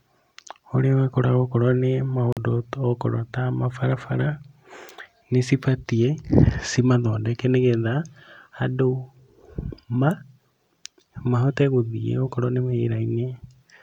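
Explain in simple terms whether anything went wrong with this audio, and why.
At 2.33 seconds the speech briefly vanishes, leaving 43 ms of silence. It then resumes further along, as though it had kept playing. This is likely a Bluetooth dropout, where audio packets reached the headphones too late and were discarded.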